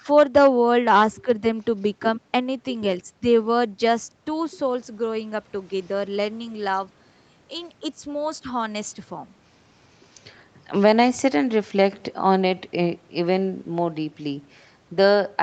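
Nothing stood out on listening to this speech, which comes through with the limited top end of a call path that stops at about 8 kHz.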